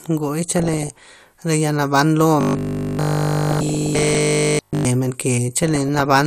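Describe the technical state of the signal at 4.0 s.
At 4.0 s three faults overlap. Throughout the clip, the audio was likely squeezed through MP2 compression at a low rate around 80 kbps. Too few bits for the sub-bands leave the upper range switched off or coarsely quantised, so the speech sounds dull, with an obviously audible gurgling, granular edge.

From 2.41 to 4.85 s, new audio seems to arrive too seldom, and the software fills the gaps by looping the last 20 ms or so over essentially the whole span. This is likely robotic sound from repeated short buffers: the loop imposes a fixed 50 Hz buzz, turning the speech into a rigid, metallic drone.

From 3.51 to 4.18 s, DAB burbling adds on top. Bit errors at roughly one percent slip past error correction into the MP2 data, corrupting samples and scale factors so individual sub-bands jump in level frame to frame, giving bubbling, squelchy chirps across the sound.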